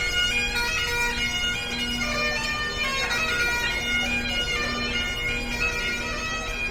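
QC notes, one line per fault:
throughout Opus compression: tones turn grainy, rough and noisy, with full bandwidth up to about 20.2 kHz; likely Opus music-mode noise-filling of starved bands, consistent with roughly 24 kbps.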